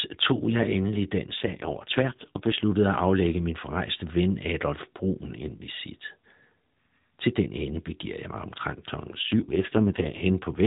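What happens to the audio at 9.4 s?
At 9.4 s the sound is inside an AMR rate drop running from about 9.06 to 10.27 s. The mobile codec has switched to a much lower mode, which fits a fall from 12.2 kbps to 4.75 kbps, so far fewer bits describe each 20 ms frame and the speech turns buzzy and synthetic. On a spectrogram the band still stops near 4 kHz with no gap, but the harmonic lines go smeared and coarse. The waveform stays continuous throughout.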